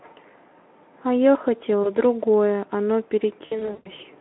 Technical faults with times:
1.83-1.90 VoIP packet loss concealed by the speech codec
3.45-3.88 VoIP packet loss concealed by the speech codec

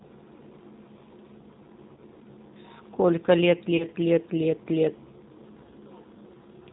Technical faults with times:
0.00-6.72 G.729 codec
1.94-2.00 VoIP packet loss concealed by the speech codec
3.77-3.85 VoIP packet loss concealed by the speech codec

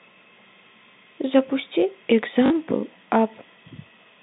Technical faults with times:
2.46-2.50 packet loss with last packet repeated

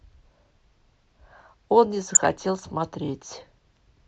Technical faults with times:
2.15-2.25 DAB burbling

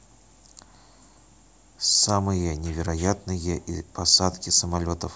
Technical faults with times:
none

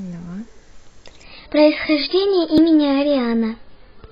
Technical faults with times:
1.24-4.12 adaptive stream at a lower bitrate
2.58 dropped buffer (overrun)

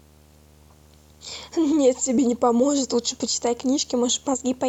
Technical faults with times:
0.00-4.69 video or display buzz

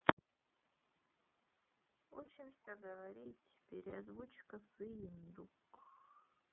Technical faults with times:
0.00-6.53 iLBC codec
2.25-2.28 lost iLBC frames
3.90-3.93 lost iLBC frames
5.76-5.79 lost iLBC frames

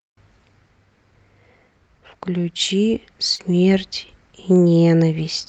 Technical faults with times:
3.35-3.41 short concealed packet loss

